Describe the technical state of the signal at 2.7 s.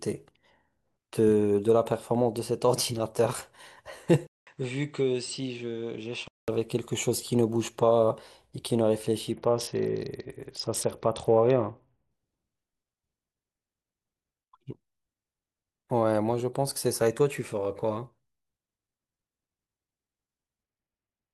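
Nothing is wrong with the signal at 2.7 s; the speech there is intact, with no fault audible.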